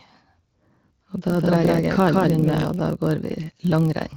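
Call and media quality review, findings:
Steady 43.1 Hz buzz throughout, pitch and pace at normal, playback only 0.999 times speed. Block size mismatch (padded): a writer stage delivers short blocks into a reader expecting what fits a 1024-sample block, and each block's zero-filled tail gaps the audio at the block rate.

1.30 to 2.64 s: second, equally loud, full-band copy trailing by roughly 150 ms, dry, switching on and off abruptly. Doubled audio track, likely from a slower second capture path or misaligned edit.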